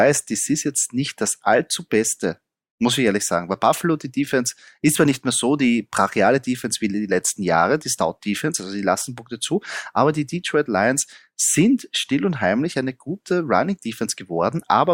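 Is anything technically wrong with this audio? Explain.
No, nothing is technically wrong with this audio.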